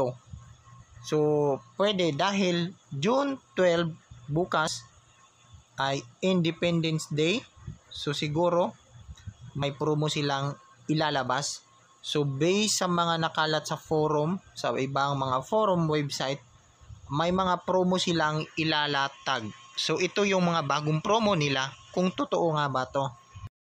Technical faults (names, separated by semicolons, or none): audio missing between chunks